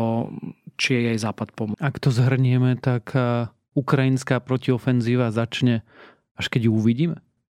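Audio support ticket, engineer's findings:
Tick and sudden jump in the speech at 1.74 s, brief mute of a few milliseconds. Probable component: disc transport and laser pickup. CD skip: a knock or disc flaw threw the laser onto another spiral turn, so playback resumed elsewhere.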